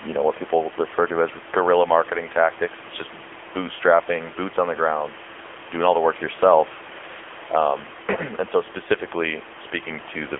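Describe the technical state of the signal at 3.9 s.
At 3.9 s the speech is passing through the AMR narrowband mobile codec, a fault that runs through the whole clip. Everything above about 3.6 kHz is gone, and the band sits near 300 Hz to 3.4 kHz. Each frame rebuilds the voice from a vocal-tract model and a few pulses, and at a low mode around 8 kbps that gives a plainly buzzy, synthetic edge. The room noise, about 17 dB below the speech, turns into a swirling warble. That texture is what separates it from simple telephone band-limiting.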